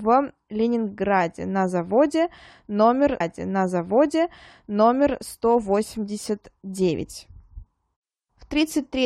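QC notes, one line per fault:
3.19 to 5.19 s, stream segment repeated: about 2.0 s of the speech plays a second time, with a small blip where it jumps back. The player fetched or queued the same chunk twice, so that stretch repeats and the clip runs 2 s longer.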